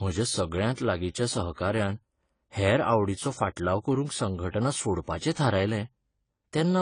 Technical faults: AAC compression; pre-echo

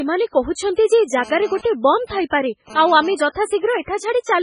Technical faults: MP3 compression; GSM phone buzz

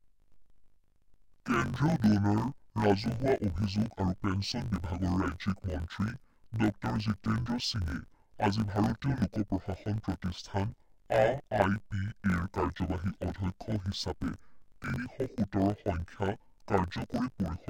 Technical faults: interleaved audio read as planar

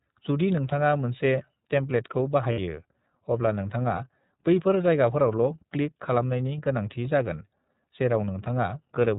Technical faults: iLBC codec; lost iLBC frames

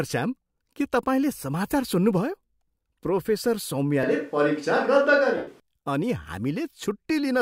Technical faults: switch to a distant microphone; lost LE Audio frames

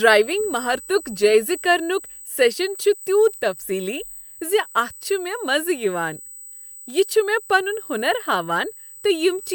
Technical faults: USB whine

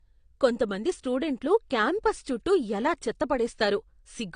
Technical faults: low-bitrate audio saved at a high bitrate

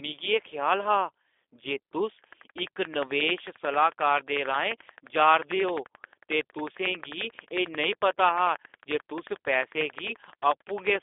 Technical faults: G.729 codec

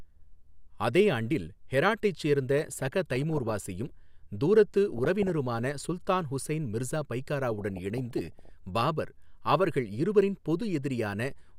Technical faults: DAB burbling

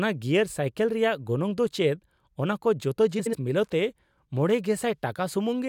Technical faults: frames out of order

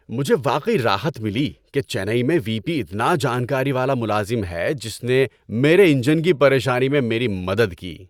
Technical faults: none

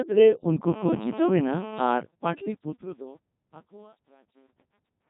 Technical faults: Codec 2 vocoder; truncation distortion on a fade

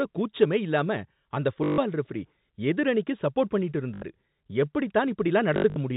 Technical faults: packet loss with last packet repeated

